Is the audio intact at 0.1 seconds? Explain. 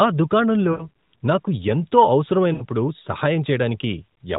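Yes, the audio is intact at 0.1 s, with no fault at that moment beyond the narrowband character of the AMR-NB mobile codec it passes through.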